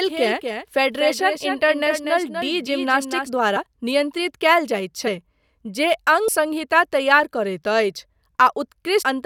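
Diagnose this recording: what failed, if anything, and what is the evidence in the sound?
A second, slower capture path was likely mixed into the recording, producing a doubled audio track. From the start until 3.3 s, a full-band copy about 5 dB quieter trails the sound by roughly a fifth of a second, with no room colour, then cuts off abruptly.

At the codec or storage stage, whole compressed frames were lost and the decoder skipped them, causing compressed frames to be skipped. Jumps occur at 3.55 s, just before "नियन्त्रित कयल", 5.06 to 5.08 s, 6.27 s and 9.01 to 9.03 s. They drop roughly 50, 100, 70 and 200 ms, multiples of 23.2 ms frames.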